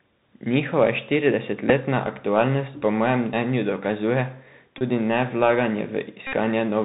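A speech clip carried over a Bluetooth headset link using the CVSD codec, whose one-bit, 64 kbps delta coding is plainly audible throughout: nothing passes above 4 kHz, s sounds come out scratchy, loud high-frequency sounds distort as they outrun the adaptive step, and a granular hiss sits under the speech. The Bluetooth headset packet repeated fault also occurs: voice packets were lost and the chip re-decoded the previous packet's bits. At 1.69 to 1.71 s, just before "aktualnost po mojem mnenju", about 7.5 ms was replaced, which fits two repeated packets. After "po mojem mnenju dokazuje", from 4.78 to 4.83 s, about 26 ms was replaced. From 6.27 to 6.35 s, about 52 ms was replaced. These two longer runs repeat every 3.75 ms, which produces a short buzz near 267 Hz.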